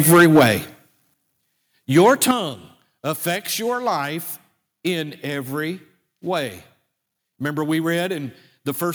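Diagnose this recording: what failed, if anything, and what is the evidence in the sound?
Microphone overload at the converter: harsh, flattened peaks from 0.09 to 0.51 s (about 9 dB over, roughly a tenth of samples) and 1.96 to 2.31 s (about 3 dB over), likely from excessive input gain.

Microphone volume stepped down in call processing: sudden level drops of about 3 dB at 0.14 s and about 8 dB at 1.14 s and 2.31 s, likely automatic gain control reacting to clipping.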